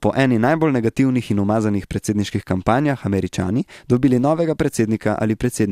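No technical faults can be heard anywhere in the recording.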